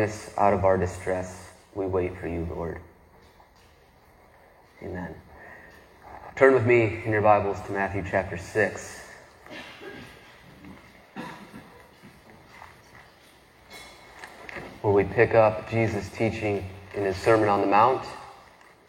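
No technical faults can be heard anywhere in this recording.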